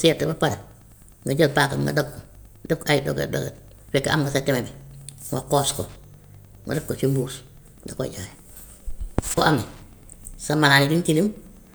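Right from the start and all the way through, there's Wi-Fi interference under the speech: a steady tick roughly ten times a second, one every 102.4 ms, from a nearby radio's beacon being picked up and rectified by the audio circuit. It sits well down, around 35 dB below the speech.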